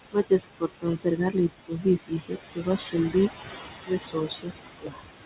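From the start the noise suppressor artifacts are present. The room noise, only about 9 dB under the speech, is pulled down by about 20 dB in the gaps and rises back under each phrase. The suppressor judges each band frame by frame, so the background pumps with the talking. A steady hiss would not do this, and the dull top above 4 kHz, which fits a narrowband G.711 call path, cannot account for it.

The speech is then cut by the noise suppressor four times: 0.12 to 1.36 s, 1.68 to 3.15 s, 3.86 to 4.52 s and 4.81 to 5.02 s. Each span loses a few hundred milliseconds in total, the second one most. Soft consonants and word endings are treated as noise and dropped by up to about 21 dB (about 19 dB in the second span), so they sound swallowed. Packet loss would leave abrupt silences or clicks. Here the sound is turned down with the background rather than cut off.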